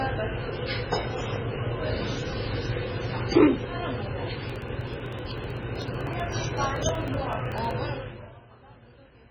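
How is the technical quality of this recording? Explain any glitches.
The technical quality is poor, with two distinct problems.

Across the whole clip, the sound is dull and watery. Nothing reaches above 7 kHz, and the remaining detail swirls and chirps. The likely cause is heavy MP3 compression at a very low bitrate, consistent with roughly 16 kbps. With so few bits, the encoder cuts off the treble entirely. It also drops weak frequency components, which flicker in and out between frames. That flicker gives the metallic, underwater texture, and transients smear.

From 4.50 to 7.71 s, periodic USB or driver dropouts appear. A steady tick repeats every 0.063 s, around fifty times in all. Each tick marks a tiny gap, roughly a millisecond of audio skipped rather than replaced with silence. A background task is stalling the bus or audio driver at a fixed interval. The signal jumps across the missing samples, and that discontinuity produces the click. 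The regular spacing gives it a mechanical rhythm.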